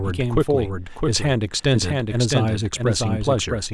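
From the start of the speech to its end, a doubled audio track runs underneath: a second, full-band copy trails the original by around 0.7 s at roughly 5 dB lower, so each phrase returns as a distinct, dry repeat with no reverberant tail or room colouring. The copy is present for the whole clip, which likely points to the signal being captured twice through paths of different latency, or an edit leaving two misaligned copies stacked.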